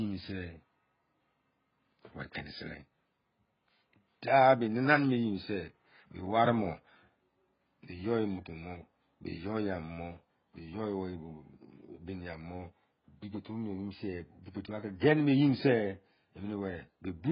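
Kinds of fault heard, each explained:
AAC compression: the speech is dull and smeared, nothing above 5 kHz, with warbly texture, likely from heavy AAC-LC coding consistent with about 12 kbps.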